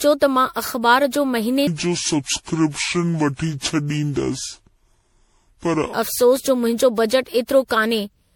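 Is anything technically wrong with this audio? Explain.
Yes. Throughout the speech, the sound is swirly, smeared and hollow, with blurred attacks: generation loss, likely from about seven successive MP3 encodes at 96 kbit/s, each adding fresh quantisation noise.

From 1.67 to 5.93 s, a section at the wrong speed plays at 0.624 times, dropping roughly seven semitones, deep and slow, likely from a mismatched playback clock.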